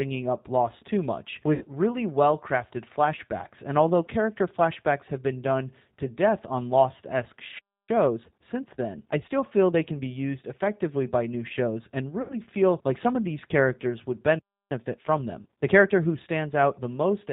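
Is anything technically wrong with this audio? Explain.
Yes. The speech carries several faults.

Throughout, the audio shows G.729 codec damage. The sound is band-limited, with nothing above 4 kHz. It sounds rough and slightly synthetic. That fits an 8 kbit/s codec that rebuilds speech from a filter, a pitch predictor and a few pulses per frame.

There is VoIP packet loss concealed by the speech codec at 1.54 to 1.65 s, 12.22 to 12.40 s and 15.42 to 15.46 s. About 70, 80 and 40 ms of audio went missing. The decoder stretched its last pitch and filter into a fading sound. The speech stays weak briefly afterwards.

From 14.38 to 14.72 s there is a playback stall. The sound stops mid-flow for about 0.31 s, then resumes. The likely cause is the player running out of data or being blocked.

Time-compressed catch-up runs from 7.89 to 10.75 s at 1.1 times speed, and from 14.72 to 15.96 s at 1.25 times speed. 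Small pieces are cut out and cross-faded to clear the backlog. The speech sounds hurried at normal pitch.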